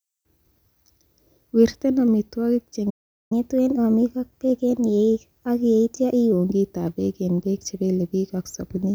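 A playback stall hits this speech clip from 2.90 to 3.32 s: the sound cuts out for about 408 ms, likely because the player's buffer ran dry or its thread was blocked. Catch-up at higher speed follows from 3.32 to 6.32 s, starting with "kitab beek en beek", with the backlog resampled to 1.1 times normal speed, so pitch rises about a semitone and a half until normal playback resumes.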